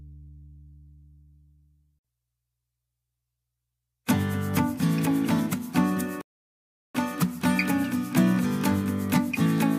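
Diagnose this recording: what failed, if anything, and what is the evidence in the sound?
A playback stall at the playback stage: the sound cuts to silence from 6.21 s to 6.95 s, a gap of about 0.73 s, then restarts. Unlike a brief dropout, the silence is long and abrupt, and likely comes from the player starving for data or a blocked thread.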